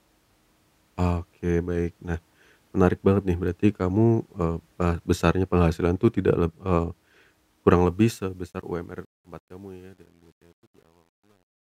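From 7.67 s to the end, the fade-out stage rounds each sample to too few bits with no dither, which fits about 10-bit resolution. This truncation distortion on a fade turns gritty, and from 8.82 s the fading speech sounds at its worst.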